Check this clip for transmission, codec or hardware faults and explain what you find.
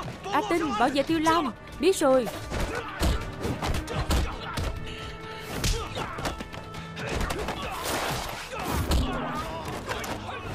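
No transmission, codec or hardware faults turn up in this clip.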